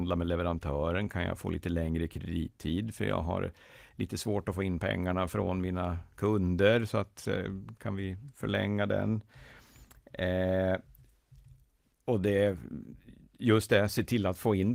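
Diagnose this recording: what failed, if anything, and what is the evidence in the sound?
Nothing stood out on listening to this speech recording that would point to a failure at any stage of the chain.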